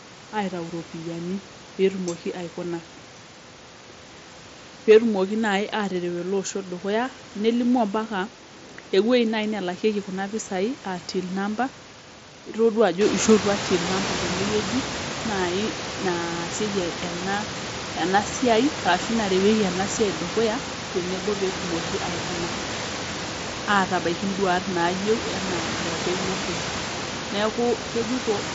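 Nothing technically wrong turns up in this speech recording, just the room's own background noise, which gets noticeably louder from around 13 s, and the bandwidth of a wideband Bluetooth headset link doing its usual job.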